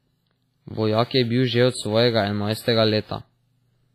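Heavy WMA compression, likely from a low bitrate near 24 kbps, smears quantisation noise across the speech throughout, leaving it ringing and washy, with breathing hiss and nothing above 15.5 kHz.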